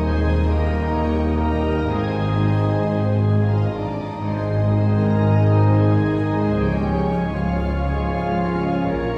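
No technical faults can be heard anywhere in this recording of sounds, and the signal holds steady throughout.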